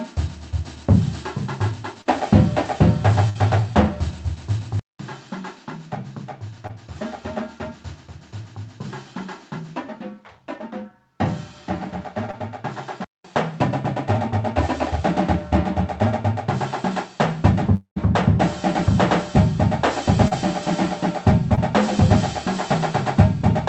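At 2.01 to 2.07 s a short concealed packet loss occurs: about 40 ms of audio never reached the decoder in time, and the receiver filled the hole by extending the preceding sound before blending back into the real signal. It comes through as a brief smear or wobble. The same thing recurs at 6.67 to 6.71 s, 12.31 to 12.35 s, 20.28 to 20.33 s and 21.55 to 21.59 s, the later ones covering about 20 ms each, and the one at 20.28 s about 40 ms.

At 3.29 to 3.37 s a burst of packet loss removes about 60 ms in a row. The receiver carries the last sound forward and lets it fade across the gap, so a held buzz or sinking hiss stands in for the missing stretch, and the audio picks up again slightly further along with that piece gone.

From 4.79 s to 13.24 s the sound changes character, most likely because the input was switched to a poorer device. The change opens with a 200 ms silence. After that, the audio is roughly 10 dB quieter, nothing above 7.6 kHz gets through, and a faint new background noise sits well beneath the signal, giving a duller, boxier tone until it clears at 13.24 s. 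All of this rides on the call's Opus path, whose own band edge lies near 8 kHz.

At 17.75 to 17.98 s a long network dropout, likely the cause here, cuts off about 220 ms. Concealment stretches the last sound into a fading buzz or hiss, the final 100 ms fall to silence, and the audio returns further on with that section missing.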